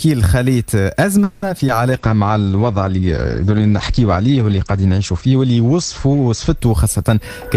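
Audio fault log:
1.23–1.44 s, call audio freeze: the sound stalls into a fading buzz for about 190 ms and then resumes where it left off, likely packets held up in transit.
1.58 s and 1.67 s, short concealed packet loss: two quick smears where 40 ms and then 20 ms never arrived and were patched over by stretching the preceding sound.
1.92–7.57 s, call bitrate drop: the encoder falls from 48 to 11 kbps and bandwidth shrinks from 20 kHz to 8 kHz, so everything turns muffled and rougher.
2.01–2.27 s, jitter buffer slow-down: repeated pitch periods add 46 ms to rebuild the reserve, so this stretch plays at about 86% speed, drawn out at unchanged pitch.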